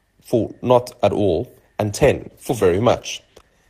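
From 1.9 s, a call bitrate drop turns the speech rough and muffled, as if coding fell to around 13 kbps. On the spectrogram, the high band vanishes.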